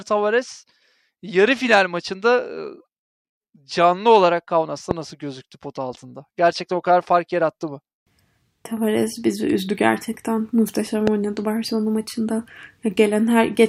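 Speech recording with two loud pops, at 4.91 to 4.93 s, between "canlı olarak" and "nasıl gözüktü pot altında", and at 11.07 to 11.10 s. Each is a single sharp click roughly 15 dB above the speech, which continues underneath. The likely cause is a voltage transient from a plug, switch or static discharge.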